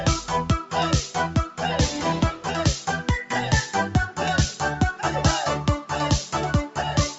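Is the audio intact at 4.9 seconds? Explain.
No. At 4.9 seconds the sound is still under a noise suppressor applied to music or sounds, which is active across the whole clip. Built for speech, it treats sustained tones, ambience and decay tails as noise and pulls them down by around 5 dB, so attacks survive while held parts sink. A compressor pumps in step with level, but this gain follows steadiness. The dull top above 8 kHz is just the call path.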